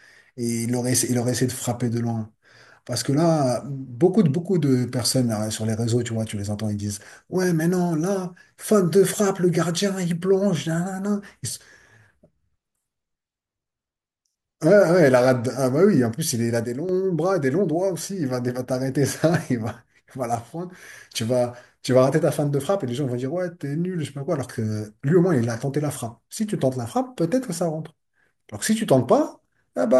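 A speech clip with two sudden gain jumps, dropping by about 6 dB at 16.64 to 16.89 s and 20.35 to 20.71 s, likely unramped digital gain changes.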